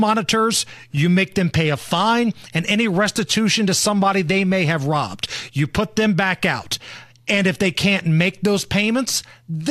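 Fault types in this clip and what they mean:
No faults are audible.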